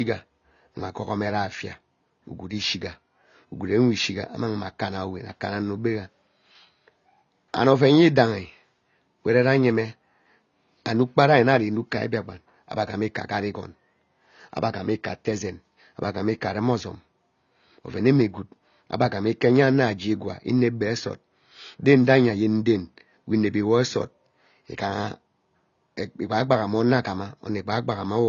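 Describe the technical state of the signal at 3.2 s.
At 3.2 s, as across the whole clip, the speech is band-limited with nothing above 7 kHz, and it sounds dull and smeared with a watery, fizzy texture on sibilants. The likely cause is AAC compression at a low bitrate, roughly 24 kbps, where the codec discards high bands and coarsely quantises the rest.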